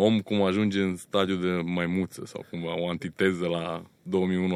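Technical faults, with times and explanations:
No technical faults can be heard in this speech clip. There is nothing here that needs a time or an explanation.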